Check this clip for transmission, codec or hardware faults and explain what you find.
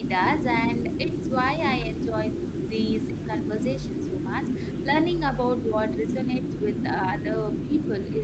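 There's one fault here, speech suppressed in double talk, showing up twice. The first is a brief dip from 0.00 to 0.06 s right at the start; the second runs from 5.66 s to the end of the clip. Both times the speech level drops by roughly 10 dB and sounds pulled back. The likely cause is an echo canceller that couldn't tell this talker apart from loudspeaker echo while both sides were speaking, so it turned everything down together. The top end stopping around 8 kHz is just the Opus call path's normal bandwidth.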